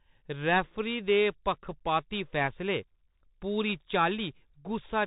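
From start to end, the speech carries the Bluetooth CVSD headset codec sound: nothing above 4 kHz, scratchy s sounds, and a grainy hiss, with the one-bit slope tracker lagging loud highs, consistent with 64 kbps CVSD. Unlike a plain low-pass, the grit marks it.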